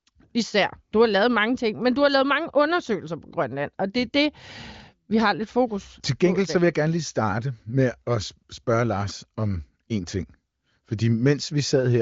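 Speech carried over an AMR wideband (HD Voice) link, with no content above about 7.5 kHz and at most faint coding texture, consistent with one of the higher AMR-WB rates; no technical faults are audible.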